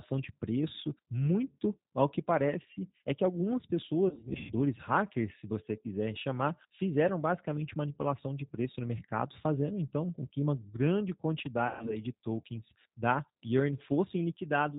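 Throughout the clip the speech carries the sound of the G.729 codec, which fits G.729A at 8 kbit/s. The encoder models each 10 ms frame with a vocal tract filter, a pitch predictor and a handful of pulses, so everything above 4 kHz is missing and the codec damage is plainly audible: sibilants are dull, and voiced sounds take on a rough, slightly synthetic texture.

From 4.09 to 4.53 s, after "parece é que algumas", there is VoIP packet loss concealed by the speech codec. About 260 ms of audio goes missing in gaps scattered across 400 ms, with the longest gap 120 ms, which points to around thirteen lost packets. The decoder stretches its last pitch and filter into a fading sound, and the voice stays weak until "hackers se você quiser".

At 11.67 to 11.97 s, after "com que uma grande", the same concealment covers about 140 ms of loss, likely seven packets. The sound is stretched and fades before recovering at "de tokens da".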